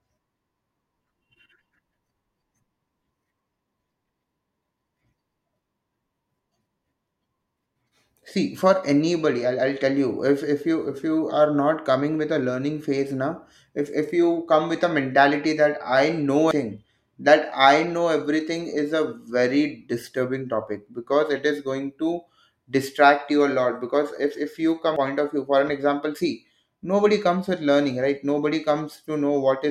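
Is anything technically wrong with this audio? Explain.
Yes, there is damaged data in a compressed stream at 16.51 s and 24.96 s. Corrupted bytes made the decoder misread those frames, lose sync and hunt for the next frame header, and each spot breaks into a brief chirp or blip in the speech.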